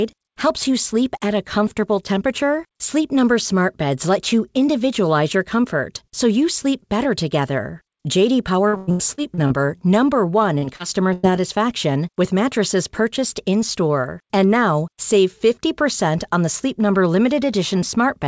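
From 8.68 to 9.70 s the audio turns choppy, with pieces dropping out and being papered over by smeared continuations. This is repeated packet loss. Eight separate gaps fall inside that second, the longest about 101 ms. Roughly a third of the stretch, some 340 ms in all, never arrived in time. The receiver rebuilt each hole from the sound just before it, and the next hole came before the audio could settle.

At 10.58 to 10.64 s and again at 10.76 to 10.81 s there are two brief wobbles, each a small smear lasting only a few hundredths of a second. Both are short concealed packet loss. Each time about 40 ms failed to reach the decoder. The receiver extended the preceding sound across the gap, keeping its pitch where it was voiced or using shaped noise where it was not, and then blended back into the real signal.

From 11.13 to 11.25 s the sound holds and fades for a moment before jumping ahead, as a held buzz or dying hiss replaces what should be there. 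This is a burst of packet loss. About 100 ms went missing in one run. The receiver stretched the last sound across the gap and turned it down, and when real audio resumed, the part in between was simply gone. The call path itself has no content above 8 kHz, which fits a wideband codec such as G.722.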